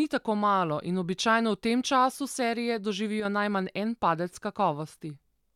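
A speech clip with a brief one-channel dropout between 3.20 and 3.25 s, right after "v tem času serije" and before "najmanj en padec". For about 50 ms the level falls abruptly by about 6 dB and then snaps back. That is likely one side of a stereo pair cutting out before the mono sum, so only half the shared signal survives. On a waveform it shows as a sharp-edged notch in the envelope. A spectrogram shows a thin vertical band dimmed evenly across all frequencies.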